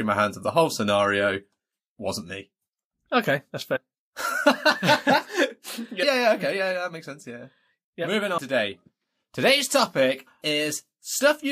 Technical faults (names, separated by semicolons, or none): compressed frames skipped